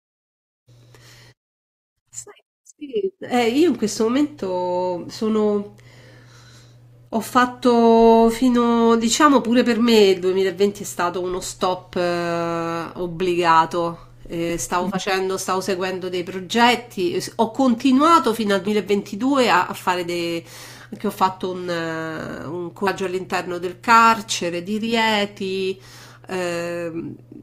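Speech clip with compressed frames skipped at 22.86 s: roughly 400 ms of audio vanishes, fitting about fifteen 24 ms frames, visible as an abrupt spectrogram discontinuity.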